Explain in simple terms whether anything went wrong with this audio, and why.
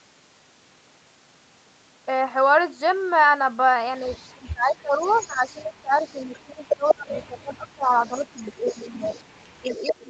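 Two problems are audible. The first is speech suppressed in double talk. From 4.0 to 9.1 s, and again from 9.61 to 10.04 s, the voice dips sharply and breaks up. The likely cause is both sides of the call talking at once, so the echo canceller turned the talker down along with the echo.

The second is echo leak. A delayed copy of the speech, arriving about 0.19 s late, comes through at 4.11 to 4.33 s, 4.95 to 6.25 s, 6.84 to 7.17 s, 7.84 to 8.17 s, 8.66 to 9.23 s, and 9.71 to 9.93 s. This is likely a loudspeaker echo that the canceller failed to fully remove.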